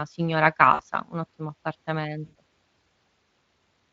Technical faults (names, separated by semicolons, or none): VoIP packet loss concealed by the speech codec